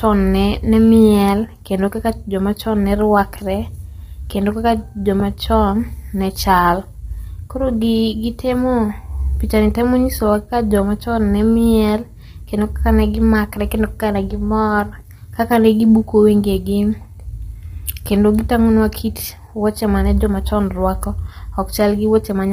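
From start to finish the speech carries heavy codec damage. It sounds rough and grainy. Noise fills the gaps between the harmonics, and nothing is heard above about 15.7 kHz. The likely cause is low-delay AAC compression, the AAC-ELD kind used for video calls. Its short frames cannot separate closely spaced pitch harmonics well, and they spend more bits doing it. The heavy damage fits a low bitrate, around 24 kbps.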